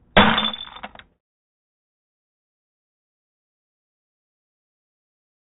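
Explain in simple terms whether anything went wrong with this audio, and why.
Listening to the recording, nothing stood out as having gone wrong with the sound.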